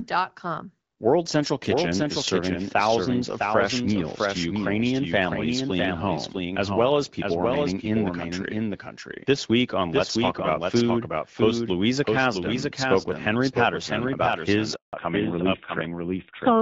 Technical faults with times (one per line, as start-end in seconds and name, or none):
0.00-16.61 doubled audio track
14.75-14.93 handover gap
14.93-16.61 fallback to narrowband